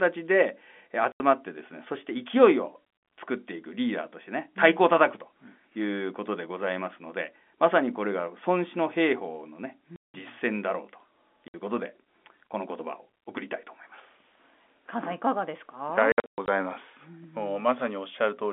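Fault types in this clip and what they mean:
Packet loss filled with silence: lost packets (gaps fit 20 ms packets) leave silent holes of up to 180 ms, seen as flat waveform stretches and blank spectrogram columns with hard edges.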